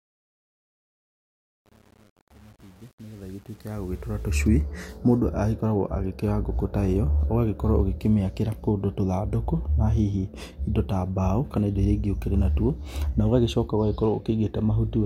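From the start to about 4.36 s, the fade-in carries truncation distortion, worst from 0.0 to 4.11 s. The gain stage drops the low-order bits without dither. The grit fits something like 9-bit resolution. As the speech rises from near silence, the waveform stays coarsely stepped, so it sounds gritty. Unlike steady hiss or a gate's chatter, the grit follows the signal and clears as the level grows.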